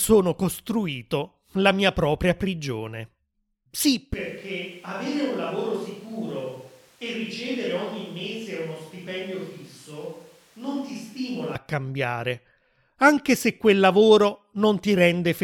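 A speech recording. From 4.14 to 11.55 s the sound turns abruptly roomy and thin, roughly 10 dB quieter, with more background noise. Likely a switch to a distant microphone.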